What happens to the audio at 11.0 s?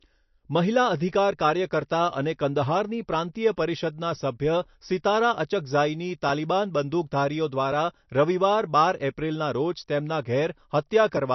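MP3 compression, likely starved of bits at around 37 kbps, persists through 11.0 s as everywhere: treble stops at 5.9 kHz and flickering weak components sound watery.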